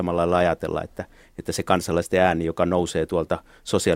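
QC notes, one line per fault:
No faults found on this speech clip.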